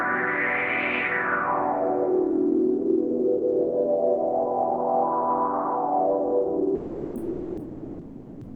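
From 6.75 s to the end at 8.55 s, the sender's voice detector, likely Opus DTX, judged the sound to be background and stopped transmitting, so this is sound dropped by the voice detector: about 1.8 s of the sound is lost and replaced by comfort noise until the clip ends.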